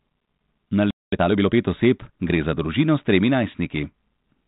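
At 0.91 s the speech just drops out into silence for about 220 ms, then picks back up at 1.12 s. That's a playback stall, likely the player running dry on data or its thread getting blocked long enough to starve the output.

Right after, from 1.12 to 1.54 s, you get time-compressed catch-up: the player trims its backlog by snipping and cross-fading tiny pieces, running about 1.5 times fast. Pitch stays put, so it just sounds hurried, over the light G.726 telephone-band character at 32 kbit/s.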